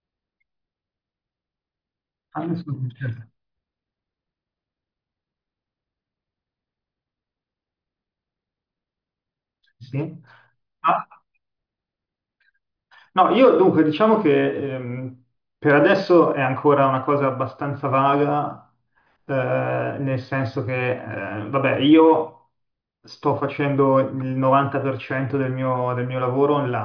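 No technical faults are audible.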